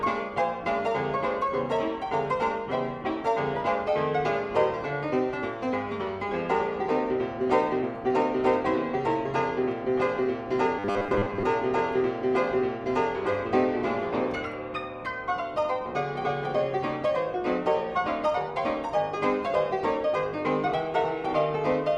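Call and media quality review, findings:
Robotic sound from repeated short buffers, 10.79–11.44 s: rigid metallic buzz near 100 Hz, consistent with a 10 ms block looped while about half the real audio is skipped. Likely jitter-buffer or decoder underrun concealment. Unlike plain dropouts, the sound keeps going, just fixed-pitched.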